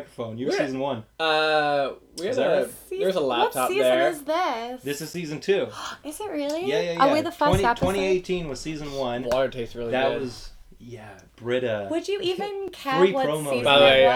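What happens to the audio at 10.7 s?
Nothing goes wrong at 10.7 s; the audio plays through that point intact, with no fault to be heard.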